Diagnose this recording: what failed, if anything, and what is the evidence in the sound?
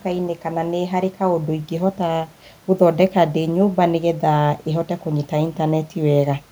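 Nothing stood out on listening to this speech recording, apart from a faint room background sitting about 35 dB below the talker.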